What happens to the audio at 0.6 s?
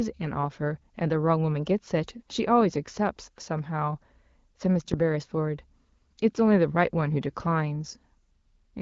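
At 0.6 s the speech comes through intact, with nothing beyond the light damage of the AMR wideband (HD Voice) codec at 12.65 kbit/s.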